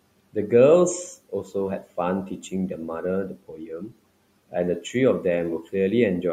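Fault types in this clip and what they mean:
Speech cut by the noise suppressor: quiet stretches are mistaken for noise and sink by up to about 19 dB along with the room noise, sounding swallowed rather than fully silenced.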